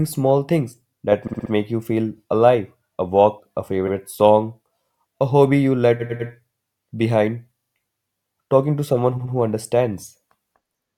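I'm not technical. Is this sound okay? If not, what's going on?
No. Repeated frames at 1.27, 3.87, 5.99, 7.57 and 9.17 seconds make the speech stutter, like a skipping record. Digital audio is stored in short chunks, and some chunks got copied, so the player runs them again. Each stutter repeats a slice 40 to 100 milliseconds long, up to four extra times. The one at 3.87 s, after "alive a walk a", is a single quick repeat. The one at 5.99 s, after "a hobby you", is the longest, adding 0.3 seconds.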